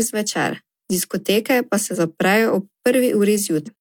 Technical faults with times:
1.91-1.97 compressed frames skipped
3.63-3.69 compressed frames skipped

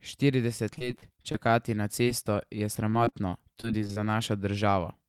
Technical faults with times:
0.57-1.51 repeated packet loss (robotic sound)
2.03-2.23 short concealed packet loss
2.90-3.98 repeated packet loss (robotic sound)
3.68-4.18 jitter buffer slow-down

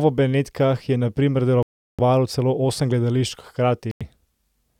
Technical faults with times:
1.63-2.00 Bluetooth stall
3.91-4.02 Bluetooth stall

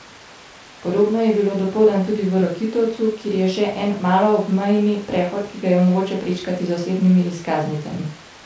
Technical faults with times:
none

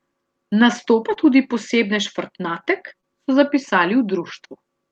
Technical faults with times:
1.14-1.18 short concealed packet loss
3.01-3.05 short concealed packet loss

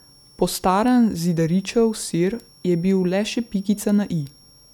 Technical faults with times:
0.00-4.74 switching supply whistle

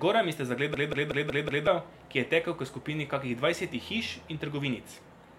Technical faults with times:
0.74-1.67 system hang loop

